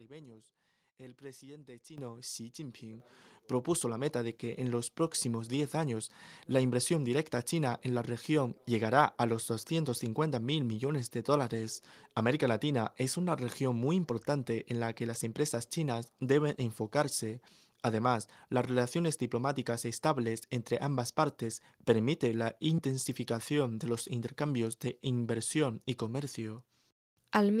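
Microphone volume stepped up at 1.98 s and again at 3.0 s, just before "propuso la". In each case the input level of the microphone was raised in a single jump instead of a gradual ramp, about 10 dB the first time and about 7 dB the second. Because the change happens at the device, the voice and the background room sound grow louder together, so the speech abruptly jumps up in level.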